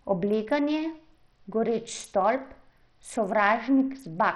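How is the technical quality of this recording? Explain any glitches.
Quality is poor throughout the speech. The damage points to likely Bluetooth SBC compression at a starved bit pool, roughly 64 kbps: treble flickers in and out with gritty noise and aliasing. A simple low-pass would instead remove the highs cleanly and steadily.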